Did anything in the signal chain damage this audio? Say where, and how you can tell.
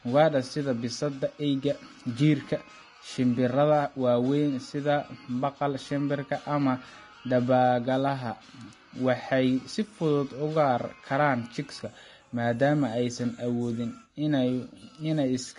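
Yes, at the codec stage: throughout the speech nothing reaches above 10.6 kHz, and the remaining treble is grainy and hissy, likely Vorbis compression at a rate fitting about 30 kbps. Unlike a plain low-pass filter, the detail below the cut-off is replaced by noise.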